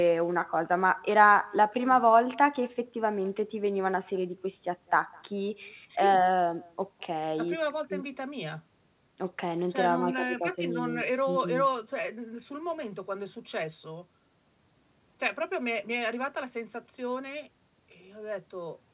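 Speech over a call where the far end had no echo canceller, so its loudspeaker output looped back through its microphone: throughout, every phrase is followed around a fifth of a second later by a faint, thin copy about 27 dB below, heard against the narrowband sound of the call codec, which stops at 4 kHz.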